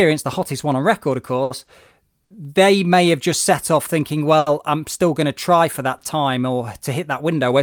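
Speech, interrupted by five short stalls from a late packet. They fall at 1.43, 1.64, 2.24, 4.38 and 5.98 s. The 2.24 s stall sits just before "they may have just". The 4.38 s stall sits between "just set off thinking" and "I'm still going to". Each time a packet arrived late, the jitter buffer ran dry. The receiver held the last sound for 20 to 80 ms, then carried on. Nothing is lost, but sounds drag briefly, with a faint buzz or dip.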